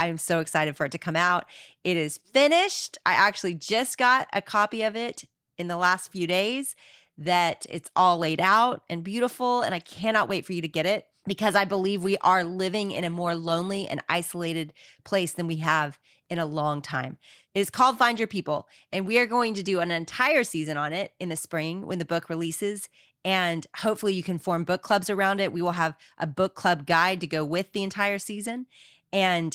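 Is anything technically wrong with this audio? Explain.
No, nothing technically wrong stood out on listening to this speech recording.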